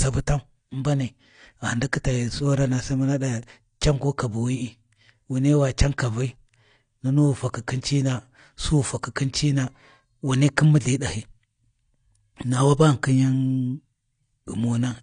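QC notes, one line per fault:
Throughout, AAC compression: the codec damage is plainly audible, leaving the speech dull and smeared, with warbling, fizzy sibilants. The likely cause is AAC-LC coarsely quantising and dropping high bands, which fits a 32 kbps bitrate.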